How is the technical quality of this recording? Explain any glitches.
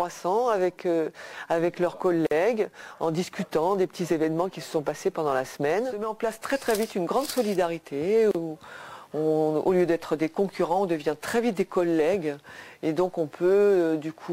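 Two short dropouts, each a gap at a join of encoded pieces: about 47 ms at 2.27 s and 34 ms at 8.31 s, six seconds apart. Separately encoded chunks were butted together untrimmed, so codec delay and end padding leave silence with smeared edges before the sound resumes.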